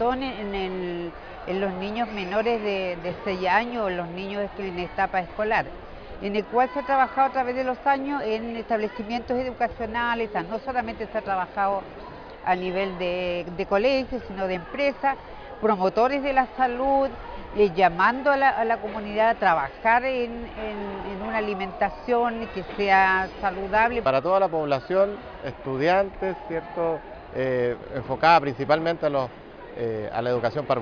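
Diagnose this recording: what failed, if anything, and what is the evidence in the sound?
Nothing has gone wrong here; the audio holds steady the whole way and there's nothing in the sound that points to a failure anywhere in the chain.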